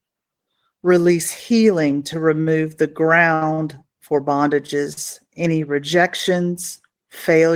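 Short stalls from a late packet occur at 2.41 s, just after "healing to", then at 3.34 s, 3.53 s and 4.93 s. Each time the jitter buffer ran dry, so the speech is held for 50, 70, 44 and 40 ms, with a faint buzz, then resumes without loss.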